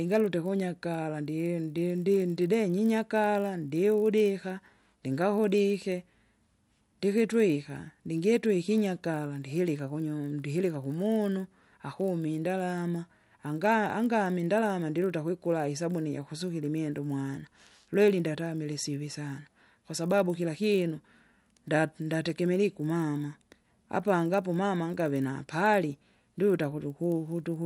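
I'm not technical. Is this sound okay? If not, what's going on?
No. Throughout the speech there's a buzz, 50 ticks per second, from a resampler restarted on every block: each 20 ms chunk's edges were converted without their neighbours.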